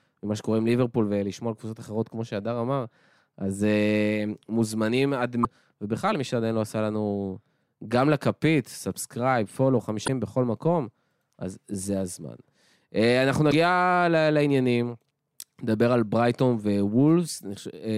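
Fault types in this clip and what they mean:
Damaged data in a compressed stream: three short glitches cut into the speech at 5.41, 10.05 and 13.48 s, each about 40 to 50 ms long. Corrupted bytes make the decoder misread those frames, losing sync until it locks onto the next valid header.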